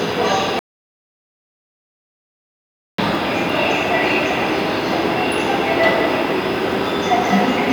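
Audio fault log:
0.59–2.98 s: audio dropout to silence. The sound cuts off abruptly and returns mid-flow after about 2.39 s of silence, with no room tone at all, likely a lost input with silence still written. The waveform is a dead-flat line, and the spectrogram shows an empty black band across every frequency.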